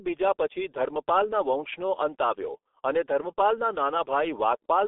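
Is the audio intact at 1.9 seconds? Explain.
No, not really. At 1.9 seconds you're hearing the same G.723.1 codec damage that runs through the whole clip. The speech sits in a narrow telephone band of about 300 Hz to 3.5 kHz, with nothing above 3.7 kHz, so it's muffled. The codec rebuilds the voice from a coarse model refreshed only once per 30 ms frame, which makes it sound hoarse and smears the consonants. The damage is heavy, consistent with a bitrate around 6 kbit/s.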